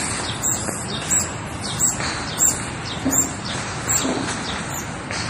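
Throughout the audio there is plainly audible MP3 compression damage: a watery, swirling texture with smeared attacks. A spectrogram shows nothing above 15.3 kHz and speckled, flickering patches where weak bands switch on and off, likely from a low bitrate around 40 kbps.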